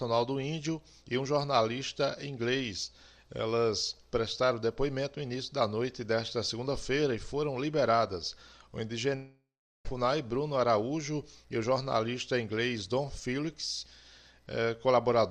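From 9.15 to 9.86 s the sound stops and is replaced by its own last moment drawn out as a fading buzz or hiss, then about 0.38 s of silence, before it resumes with roughly 0.7 s gone. This is likely a long network dropout.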